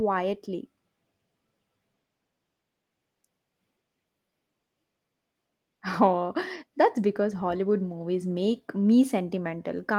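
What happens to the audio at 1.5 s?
Nothing goes wrong at 1.5 s: the speech carries on intact through that moment, with only the light, steady colouring of the Opus voice compression that runs through the whole clip.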